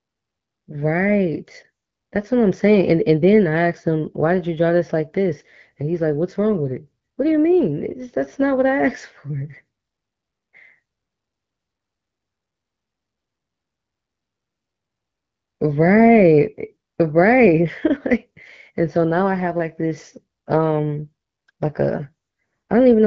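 Nothing's wrong with this speech clip; it comes through an AMR wideband (HD Voice) link that's doing its job just as it should.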